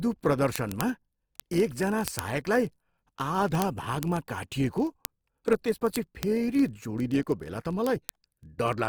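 Throughout, the speech sounds grainy and rough, with band energy kept but filled with noise. This is likely Opus compression in its music mode, at a rate that fits about 24 kbps. A spectrogram shows noisy, speckled bands reaching 20.2 kHz.

From 0.10 s to the end, word clock ticks sound about every 0.02 s, a steady buzz of sharp clicks. Two unlocked clocks differing by roughly a thousandth slip one sample each time, seen as thin vertical lines and tiny waveform steps.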